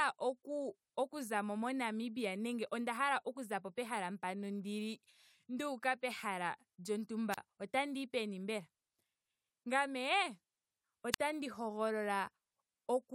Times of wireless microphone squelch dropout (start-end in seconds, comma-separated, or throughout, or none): 7.31-7.38, 11.11-11.20